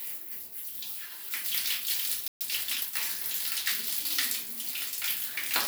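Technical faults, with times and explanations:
2.28–2.41 s: playback stall, the sound cuts to silence for about 129 ms, likely the player running dry, then resumes where it stopped, unlike a dropout that skips ahead.
2.41–2.91 s: time-compressed catch-up, the sound is hurried at 1.25x with unchanged pitch, from spliced, cross-faded fragments, unlike a pitch-raising speed-up.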